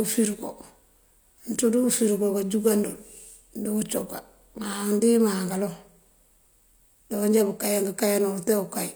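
There are no technical faults to describe in this speech.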